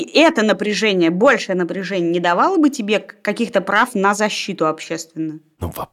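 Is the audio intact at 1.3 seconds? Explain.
No. Between 1.27 and 1.32 s the speech crackles briefly, a short rough edge on the loudest peaks just before "напряжение не". This is hard clipping: for about 50 ms the signal runs roughly 2 dB past the largest level a stage in the chain can pass, so the tops of those peaks are sliced flat. The flattened tops add harmonics high in the spectrum, which is where the crackle comes from.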